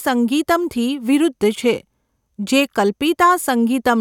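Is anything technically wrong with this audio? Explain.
No, nothing is technically wrong with this audio.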